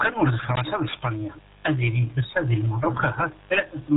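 From the first moment the speech carries the damage of the RealAudio 14.4 codec. Everything above 3.8 kHz is gone, and what remains sounds muffled and gargly, with a watery churn on each syllable. That points to a very low-rate speech coder around 8 kbit/s rebuilding the voice from a crude model. A plain low-pass filter would only dull the top. It would not smear and bubble the vowels and consonants the way this heavy coding does.

At 0.86 s a mains buzz starts and runs to the end of the clip, sitting roughly 25 dB below the speech. It is built on 50 Hz. Sharp switching spikes enter twice per mains cycle, so the result is a raspy, harmonic-rich drone rather than a smooth low hum. That edge is what separates it from ordinary ground-loop hum, which is a rounder tone with little energy far above the fundamental.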